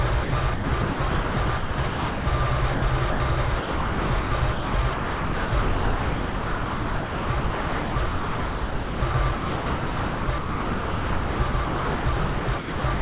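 From 0.24 to 2.26 s the sound is chopped, likely by the sender's voice detector, which switches sending on and off repeatedly. About 1.3 s in total is replaced by comfort noise. Unlike a single dropout, the gaps recur throughout the stretch.

At 2.74–2.82 s and again at 3.12–3.20 s, sound is dropped for 80 ms each time, likely because the detector took quiet sound for background. Steady comfort noise fills each gap. These are isolated, clean swaps rather than rapid switching.

From 3.58 s to the end, the choppy pattern returns, likely from the same detector. About 7.7 s is replaced. Throughout, the call path carries nothing above 4 kHz, which fits a narrowband G.711 codec.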